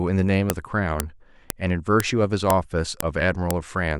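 You'll hear a sharp, loud click at 0.50, 1.00, 1.50, 2.00, 2.50, 3.00 and 3.51 s, every half second regardless of the speech. That's a file header played as audio: half-second WAV pieces were joined with their headers left in, so those bytes play as samples.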